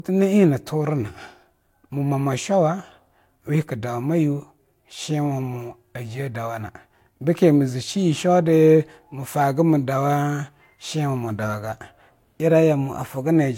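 Throughout the clip, the speech carries two layers of coding artefacts at once: a smeared, swirly texture in the upper range alongside a grainier, watery roughness, and nothing above 16.6 kHz. This is transcoding between lossy codecs, likely a chain from HE-AAC to Vorbis. The second codec spent its bits re-encoding the first codec's damage and added its own. The combination suggests roughly 48 kbit/s HE-AAC followed by Vorbis at about 63 kbit/s.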